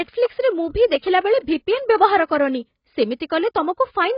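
Across the whole clip the speech sounds dull and smeared, with a warbling edge on sibilants. A spectrogram shows a flat ceiling at 5.2 kHz and patchy holes below it. Heavy AAC compression is the likely cause, fitting AAC-LC near 16 kbps.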